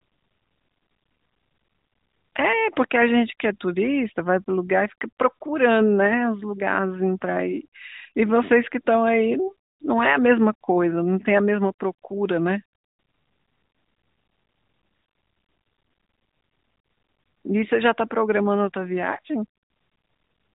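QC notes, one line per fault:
No faults found.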